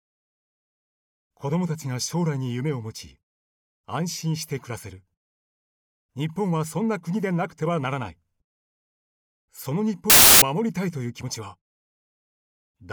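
A burst of loud, harsh broadband noise replaces the audio from 10.10 to 10.42 s, a fault of samples built from the wrong bytes. The reader misassembles each sample's bytes, through a byte offset, swapped order or wrong alignment, so the rapidly changing low-order bits dominate every value.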